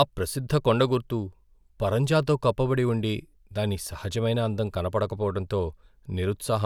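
No technical faults occur at any point in the speech, so there is nothing to describe in time order.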